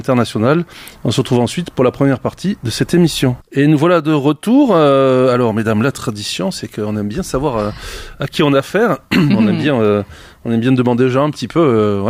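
No technical faults are audible.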